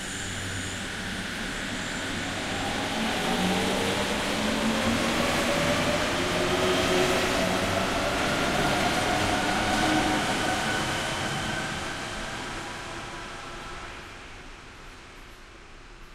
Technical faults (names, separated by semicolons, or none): none